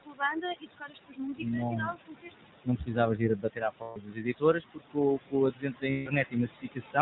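Throughout the recording, the background pumps: it drops away in the pauses and swells back under the talker. These are noise suppressor artifacts. The suppressor treats steady-looking bands as noise and turns them down frame by frame, here by about 21 dB, so the room noise, which sits only about 12 dB below the speech, keeps being carved in and out.

Over the whole clip the speech is also muffled and slightly buzzy and synthetic, with nothing above 4 kHz. That is the iLBC codec, a narrowband VoIP codec whose damage here is plainly audible. It rebuilds each short frame's excitation on its own, and the roughness fits 20 ms frames at around 15 kbps. The missing top octave removes the crispness from sibilants and consonants.

From 0.02 to 2.98 s, parts of the speech sound swallowed, with consonants and word endings going faint. This affects roughly two seconds in all and drops by about 22 dB at worst. 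This is speech cut by the noise suppressor, which mistook quieter speech energy for background and lowered it along with the noise. The same happens again from 3.15 to 4.98 s, over roughly a second and a half, at about 22 dB.

At 3.82 to 3.98 s the voice freezes into a held, slightly buzzy, breathy tone for about 140 ms, then snaps straight back to normal. These are lost iLBC frames. Packets went missing, and the decoder filled the gap by repeating the last pitch cycle mixed with noise. The length fits seven 20 ms frames. Because each iLBC frame stands alone, recovery is immediate.

A brief swallowed stretch, about a tenth of a second, follows at 5.17 to 5.35 s. It is another suppressor cut into the speech, dropping by about 21 dB.

At 5.90 to 6.08 s a second held, buzzy concealment tone lasts about 160 ms. This is lost iLBC frames again, consistent with eight missing frames, with the voice recovering at once afterwards.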